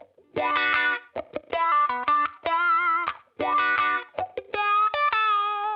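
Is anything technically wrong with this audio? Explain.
No, nothing is technically wrong with this audio.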